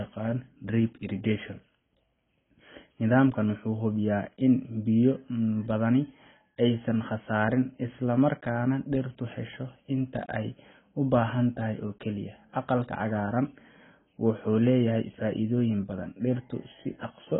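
Speech, and it's dull and smeared from start to finish, with nothing at all above about 3.8 kHz. Sibilants come out fizzy and watery, and sustained vowels have that warbling, swirly texture. The codec damage is heavy, most likely AAC compression. AAC-LC squeezed hard enough drops its cut-off and leaves gaps in the spectrum that it patches with substitute noise, and that fits a very low bitrate of around 16 kbps.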